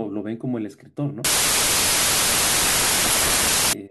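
From 1.25 s to 3.73 s there's a wrong sample width: 32-bit data read as 16-bit, so mismatched bytes give loud noise with the speech buried underneath, at half speed.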